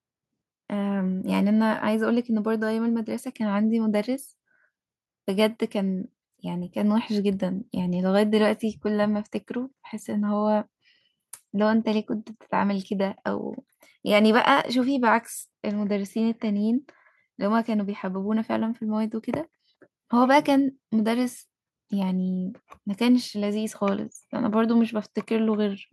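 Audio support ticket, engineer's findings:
No fault found on listening to the speech recording. Nothing audible points to a component needing attention.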